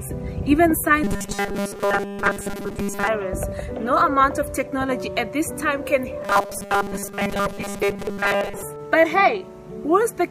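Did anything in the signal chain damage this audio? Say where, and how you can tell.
Yes. A driver or buffer stage likely caused robotic sound from repeated short buffers at 1.04–3.08 s and 6.22–8.63 s. A rigid 200 Hz buzz means 5 ms chunks looped in place of most of the real audio. Unlike dropouts, there are no silent gaps.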